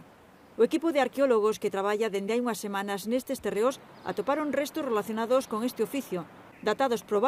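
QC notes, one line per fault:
No technical faults can be heard anywhere in the signal.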